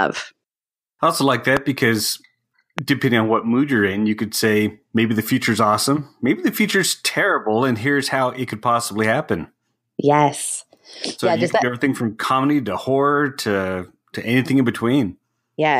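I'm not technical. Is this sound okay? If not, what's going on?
No, there are two loud pops in it. One hits right after "I also like", at about 1.57 s, and another at about 2.78 s, just before "depending on what mood". Each is a single sharp click sitting on top of the speech, likely from an electrical jolt such as a plug, switch or static.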